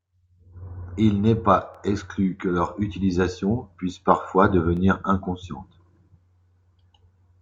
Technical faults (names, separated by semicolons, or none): overlapping chunks